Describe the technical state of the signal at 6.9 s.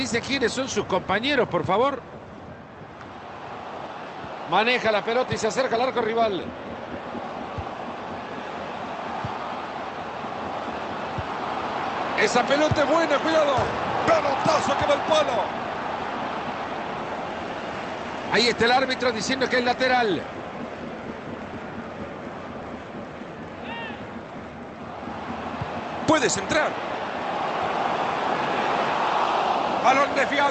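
At 6.9 s the signal is intact, with no dropout, glitch or other fault, only the ordinary band-limiting to about 8 kHz that the Opus call path applies throughout.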